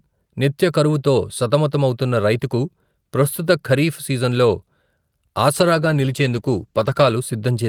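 At 5.56 s the call's bandwidth estimate falls and the encoder is pushed onto far fewer bits, a call bitrate drop whose sound fits a fall from around 48 kbps to about 15 kbps. For roughly 1.6 s the speech is coded much more coarsely, with the high frequencies cut away, so it turns muffled, rough and watery. Full clarity returns at 7.21 s as the bitrate recovers.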